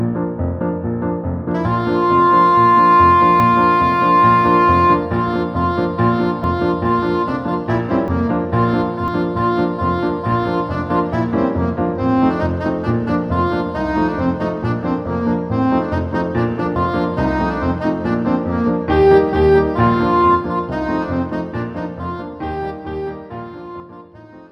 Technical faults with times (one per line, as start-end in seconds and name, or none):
3.40 dropped buffer (overrun)
6.44 dropped buffer (overrun)
8.08 dropped buffer (overrun)
9.08 dropped buffer (overrun)
16.76 dropped buffer (overrun)
23.80 dropped buffer (overrun)